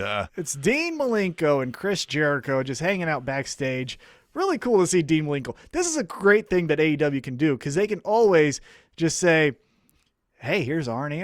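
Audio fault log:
Nothing stood out on listening to this speech recording.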